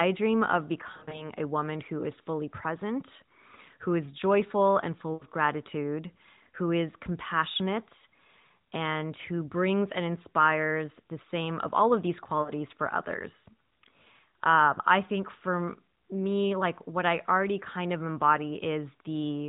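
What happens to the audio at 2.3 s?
Nothing goes wrong at 2.3 s: the speech carries on intact, with only the narrow, sub-4 kHz band of a narrowband mobile codec such as AMR-NB.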